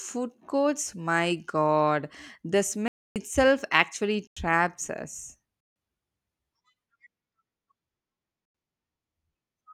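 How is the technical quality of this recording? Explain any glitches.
The recording is marred by four dropouts, each a block of digital silence. The sound cuts out abruptly, first at 2.88 s for about 0.28 s right after "courts my god the", then at 4.27 s for 0.09 s, at 5.60 s for 0.15 s, and at 8.45 s for 0.09 s. The samples there were replaced by zeros, as when the output buffer isn't filled in time. The two identical 93 ms holes fit a 4096-sample buffer.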